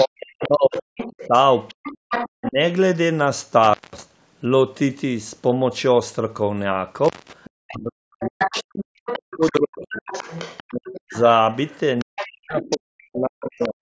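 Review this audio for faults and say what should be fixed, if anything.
Other side's voice leaking through, 0.0 to 2.52 s and 7.44 to 13.69 s: a second voice sits roughly 10 dB under the talker. The likely cause is loudspeaker playback reaching the microphone and the echo canceller leaving part of it behind. Better acoustic isolation, such as a headset, and a well-converged echo canceller would prevent it.

Speech suppressed in double talk, at 0.04 to 1.33 s, 2.28 to 2.58 s, 7.64 to 10.08 s, 10.61 to 11.15 s and 12.03 to 13.8 s: the talker's level dips by as much as about 40 dB in patches, overlapping the leaked voice. This is likely the canceller failing to separate the two and turning everything down. A canceller with stronger double-talk detection and gentler residual suppression would prevent it.

Intermittent contact, 3.63 to 4.02 s and 7.04 to 7.33 s: the sound drops out for about 0.19 s and 0.21 s, with crackle at each edge and faint hiss in the gaps. 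A connector momentarily losing contact does this. Reseating or replacing the loose cable or plug would prevent it.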